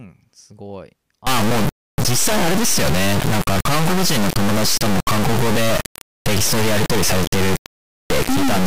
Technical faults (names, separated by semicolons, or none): integer read as float